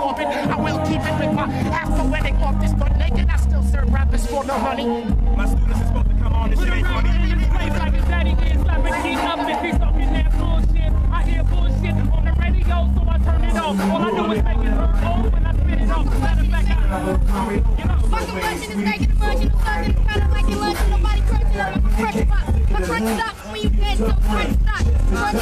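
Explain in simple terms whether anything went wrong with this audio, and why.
From the start until about 16.15 s, the audio sounds dull and muffled, like it's behind a blanket. That's de-emphasis applied wrongly: a treble cut meant to undo an earlier boost got applied when no boost was there, or was applied twice, so the highs slide away smoothly.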